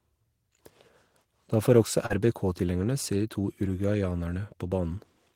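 Right after "får også", at about 2.06 to 2.13 s, there's a short concealed packet loss: roughly 40 ms of the call arrived too late, so the decoder patched it by extending the preceding sound and blending back, leaving a brief smeary wobble.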